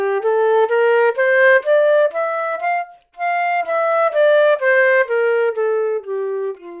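Listening closely to this sound recording, nothing stood out as a technical fault at any point.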